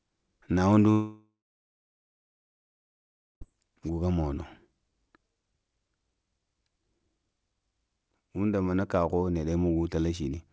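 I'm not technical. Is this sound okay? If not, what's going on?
No. At 0.92 s the speech suddenly cuts out, and you can hear the last bit of sound smeared into a short buzzy hiss that fades away, then about 2 seconds of near silence. Speech comes back at 3.43 s, but whatever was said in that gap is simply gone. That's a long network dropout, most likely the connection briefly losing the audio, with the call software filling the hole as best it could.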